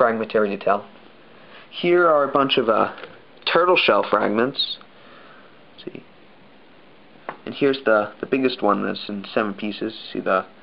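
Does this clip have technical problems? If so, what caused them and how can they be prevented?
No, there are no technical problems to report here.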